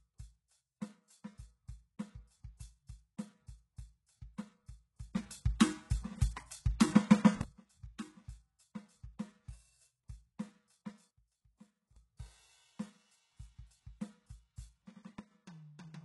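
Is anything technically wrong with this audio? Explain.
Yes. This music clip has three kinds of technical fault: codec damage throughout, two pre-echoes, and three abrupt level changes.

HE-AAC compression runs the whole length, and the damage is heavy. Nothing is present above about 11.5 kHz. The treble below that is likely rebuilt by spectral band replication, in which lower bands are copied upward and shaped by a coarse envelope, so its harmonics do not line up with the real ones beneath. That fits a very low bitrate of around 12 kbps. A plain low-pass filter would leave dull but clean highs. Here the top end is present but synthetic.

Pre-echo occurs from 2.57 to 2.60 s, spread over 26 ms, and again at 7.98 s, spread over 12 ms. The codec spreads its quantisation noise across a whole transform block. When a sharp attack falls late in that block, noise sized for the loud part spills into the quiet moment just before it. 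The hiss comes ahead of the attack, which is how it differs from reverb or echo, and the onset itself loses definition.

Sudden gain jumps occur at 5.15 s, 11.09 s and 15.19 s. At 5.15 s the level rises by about 18 dB and holds until 7.41 s. At 11.09 s it drops by about 18 dB until 11.96 s. At 15.19 s it drops by about 12 dB until 15.31 s. The cause is likely a digital gain change applied from one sample to the next with no ramp. The music and its background noise step together in a single instant. A fader move or a compressor would glide over time instead.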